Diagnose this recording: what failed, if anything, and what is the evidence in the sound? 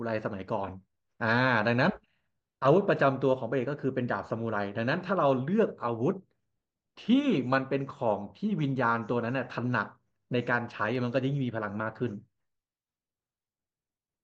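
Listening through the speech recording, nothing stood out that would point to a failure at any stage of the chain.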